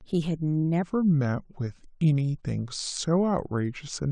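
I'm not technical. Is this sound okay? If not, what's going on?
No. From 0.82 s to the end, there is a section at the wrong speed. The speech plays at 0.79 times normal speed, sounding slower and about four semitones deeper, likely from playback on the wrong clock.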